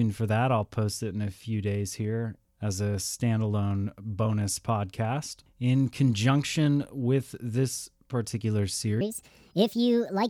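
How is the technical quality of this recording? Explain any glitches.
The recording has one glitch, right at the end. From 9.01 s to 10.29 s there is a section at the wrong speed, likely from that stretch being played or rendered against the wrong clock. It runs 1.46 times too fast, so the speech turns hurried and jumps about seven semitones higher, speed and pitch shifting together.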